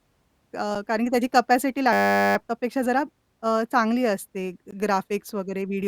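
At 0.75 s the speech drops into a block of digital silence for about 5.8 ms, which fits a 256-sample buffer at 44.1 kHz. The output buffer was left at zero for one block, so the signal steps straight to silence and back with no fade. The two hard edges sit so close together that they merge into a single sharp tick.

From 1.93 to 2.36 s there is a system hang loop. The driver or computer stalled while the playback hardware kept cycling one 10 ms piece of its ring buffer, 43 times over. At a 100 Hz loop rate this is heard as a steady, pitched buzz in place of the speech. When the stall ends the speech picks up where it left off, with little or nothing skipped.

At 4.71 s a second block of digital silence lasts about 17 ms. Because it is longer, the zeroed section is heard as a brief hole.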